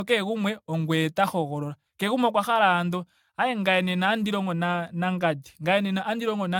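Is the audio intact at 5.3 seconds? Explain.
No. At 5.3 seconds the speech carries generation loss, and it runs through the whole clip rather than starting there. It has that swirly, hollow, smeared quality, with consonant attacks blurred and nothing above 17 kHz. It sounds like it was likely encoded around seven times over, fitting an AAC-LC chain at roughly 96 kbit/s. Each pass requantises on a shifted frame grid, so the noise and spectral holes pile up beyond what one encode at that rate would leave.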